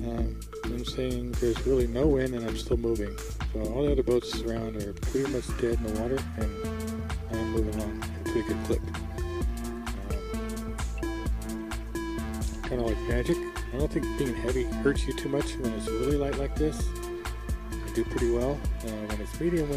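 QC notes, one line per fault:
Nothing stood out on listening.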